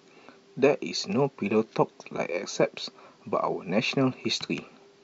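Speech recording, no technical faults to report.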